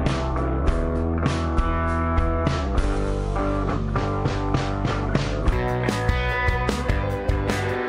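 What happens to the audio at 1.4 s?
At 1.4 s the audio sits inside a section at the wrong speed, running from 0.0 to 5.52 s. It plays at about 0.67 times its proper rate, most likely because it was fitted to the wrong clock, so everything is slowed and sits roughly seven semitones lower. Unlike a pitch shift or a time-stretch, which change pitch or tempo alone, here both drop together, giving a deep, dragging sound until 5.52 s.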